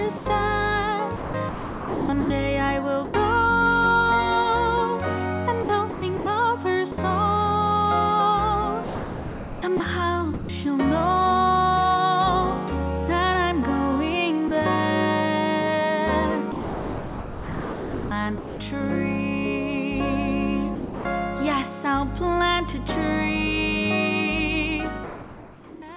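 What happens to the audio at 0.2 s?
From 0.17 to 0.26 s, about 90 ms of the sound is missing and replaced by a flat, steady noise bed before the signal returns. This is most likely sound dropped by the voice detector: the sender's detector classed that stretch as background and stopped transmitting, and the receiver filled the gap with generated comfort noise until the detector triggered again. The filler sits within the same narrowband path, with nothing above 4 kHz.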